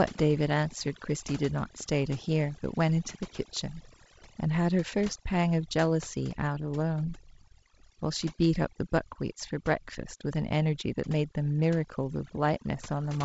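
Throughout the speech, overdone noise removal, where the suppressor was set too strong, cuts bands near its noise estimate deep or to nothing. The background drops and breaks up into twinkling specks, and quiet voice detail vanishes. A spectrogram shows scattered isolated dots between blank gaps, with content ending near 7.7 kHz from the wideband telephone coding, whose light lower-band noise fits G.722 at 48 kbit/s.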